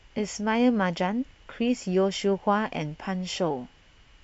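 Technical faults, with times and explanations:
No technical faults can be heard in this speech recording.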